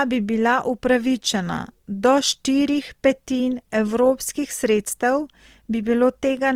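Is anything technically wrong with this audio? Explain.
Yes. Opus compression runs throughout the speech, start to finish. The texture points to the codec's music mode at a low rate, consistent with roughly 24 kbps, with the full bandwidth still kept. When bits run short, this mode keeps each band's overall energy but refills its fine detail by folding lower bands or injecting noise. The speech therefore comes across noisy, rough and grainy rather than swirly, and that damage is plainly audible.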